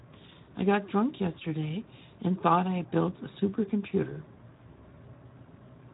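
From start to finish the speech sounds hoarse and grainy, with nothing above 3.8 kHz. This is Speex codec damage: with few bits for the excitation, this CELP coder rebuilds the voice coarsely, at a level that fits roughly 11 kbps.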